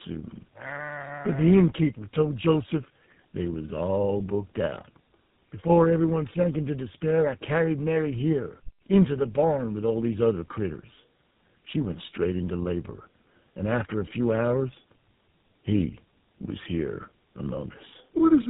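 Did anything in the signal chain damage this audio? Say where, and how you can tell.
Yes. The damage sits at the codec stage and runs through the whole speech clip: tandem speech coding, where the call was decoded and re-encoded at each link border. The sound is rougher, more muffled and more warbly than one narrowband codec would leave it, with nothing above 3.8 kHz. That compounding points to two lossy speech coders in a row, which fits iLBC feeding GSM full rate through a G.711 A-law hop. Each coder works on the previous one's errors. A single codec or a plain band-limit would not stack artefacts like this.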